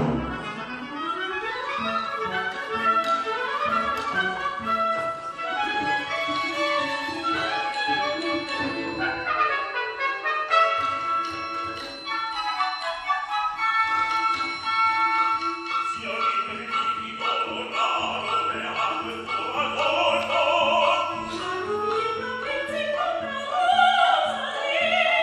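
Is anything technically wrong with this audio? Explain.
Yes. From 0.0 to 2.0 s the adaptive stream is starting at a low bitrate. The player chose a lean version of the stream to begin playing quickly, then switched to a better one after measuring the connection. During those first two seconds nothing sounds above 12.3 kHz, and coding artefacts are heavier, which points to roughly 16 kbit/s HE-AAC. At 2.0 s the quality steps up abruptly with no gap, consistent with a move to about 96 kbit/s AAC-LC.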